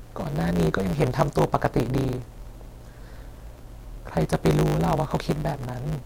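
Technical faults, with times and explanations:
Throughout, block size mismatch (truncated): an upstream stage writes longer blocks than the next stage reads, which fits 512-sample writes, and each block's tail is dropped. The result is a 100 Hz buzz at the block rate, with speech running 1.16 times fast with its timbre kept.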